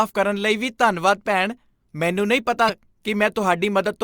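A speech recording with one brief glitch from 2.65 to 2.70 s, a burst of about 40 ms, caused by damaged data in a compressed stream: corrupted bytes made the decoder misread those frames and lose sync until it found the next valid frame header.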